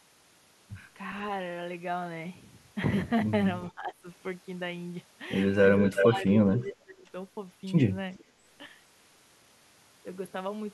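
Speech suppressed in double talk: from 3.71 to 4.07 s, and again from 5.87 to 7.14 s, the echo canceller likely treated overlapping talk as echo and turned the speech down, by about 15 dB and then about 20 dB. Echo leak: the canceller likely let loudspeaker pickup through. At 5.82 to 6.05 s this is heard as a copy delayed by 362 ms at roughly full speech level, then as faint 425 ms echoes at 6.62 to 6.71 s and 8.16 to 8.24 s.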